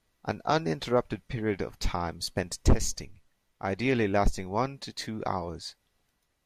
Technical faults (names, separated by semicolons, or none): none